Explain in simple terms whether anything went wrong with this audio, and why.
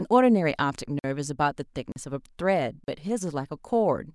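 Three times the speech briefly drops out completely: from 0.99 to 1.04 s (about 49 ms), from 1.92 to 1.96 s, and from 2.84 to 2.88 s (40 ms each). These are blocks of digital silence. Short runs of the audio were replaced with silence, most likely because the software didn't deliver its next chunk of sound in time. The sound cuts out and back with no fade in or out.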